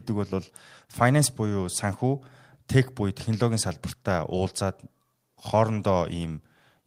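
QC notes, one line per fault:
No faults found in this recording.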